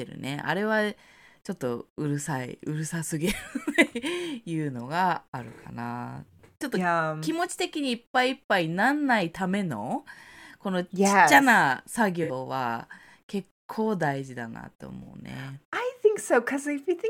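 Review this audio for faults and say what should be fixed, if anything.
Two short dropouts in the speech show AAC frame loss with concealment. At 12.23 to 12.31 s, after "ゃな作" and before "は結構大", about 64 ms of audio is replaced, which fits three lost frames. At 15.02 to 15.08 s, after "事だなと" and before "うね", about 43 ms is replaced, consistent with two frames. In each gap the decoder rebuilds the missing span from the last good spectrum, so the patch sounds smeared, noisy or phasey rather than dropping to silence. To prevent this, protect the AAC stream against packet loss with forward error correction or retransmission, and give the jitter buffer enough depth.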